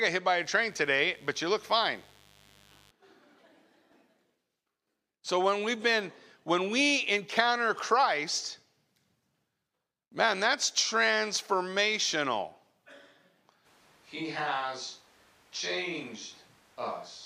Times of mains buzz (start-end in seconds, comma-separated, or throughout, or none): 0.42-2.91